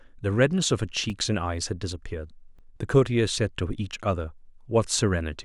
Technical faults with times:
1.10 repeated buffer
2.57-2.59 repeated buffer

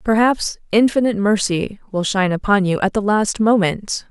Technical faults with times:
none

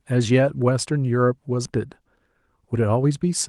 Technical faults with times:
1.65-1.67 skip ahead
2.60-3.11 jitter buffer speed-up

